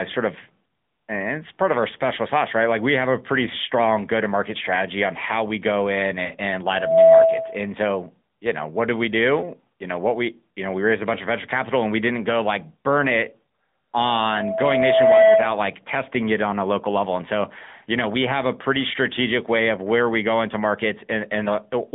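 The whole clip runs through the AMR narrowband mobile codec. The band is squeezed to roughly 150 Hz up to 3.6 kHz, so the top end is simply gone, and the codec's pulse-driven vocal tract model leaves the speech audibly buzzy and a bit synthetic. The degree of damage fits a mid-rate mode around 10.2 kbps, so it's clearly phone quality and plainly coloured.

Right after "how we go in", from about 6.26 to 6.31 s, there's a lost AMR speech frame. The checksum failed, so the decoder patched the gap by reusing the previous pitch and vocal tract settings at reduced gain. With only about 20 ms missing, you hear a quick dip, and the speech comes back a touch rough.

From about 13.99 to 15.65 s, just before "testing it on a", a loudspeaker feedback squeal kicks in. The mic is picking up its own speaker, and at 655 Hz the loop gain went over one. That single tone swells over roughly a second and a half until it's sitting something like 10 dB above the speech, a clear howl.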